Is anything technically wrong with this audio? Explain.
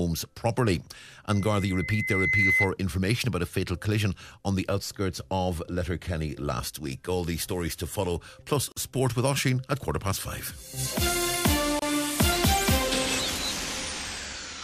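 Yes, there are two kinds of fault. From 1.29 to 2.72 s there is loudspeaker feedback squeal: a microphone re-amplifies its own loudspeaker, so a 2 kHz tone swells over about a second to sit roughly 5 dB above the sound. At 8.72 s and 11.79 s there are gaps at joins of encoded pieces: separately encoded segments kept their start delay and end padding, leaving gaps of 45 ms and about 29 ms, with smeared edges, before the sound resumes where it stopped.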